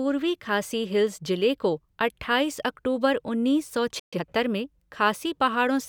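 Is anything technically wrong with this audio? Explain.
Yes, there are two linked problems in this speech clip.

Right around 3.99 s there's a playback stall: the audio just drops out mid-flow for about 130 ms, until 4.13 s. That's most likely the player running dry on data or its thread getting blocked, so output goes silent until it recovers.

Then, from 4.13 to 4.25 s, you get time-compressed catch-up. The player clears its backlog by snipping out small pieces and cross-fading the rest, running at 2x speed. The speech sounds rushed but keeps its normal pitch.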